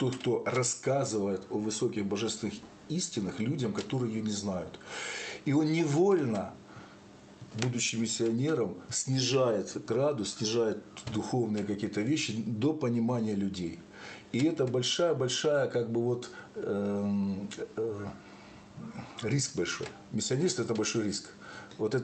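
No technical faults can be heard in the audio. It has passed through a WebRTC call path with the ordinary coding noise of a call codec, and the top end stops near 8 kHz, which fits Opus at a moderate bitrate.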